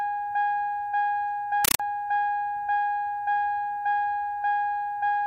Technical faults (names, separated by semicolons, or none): compressed stream played as audio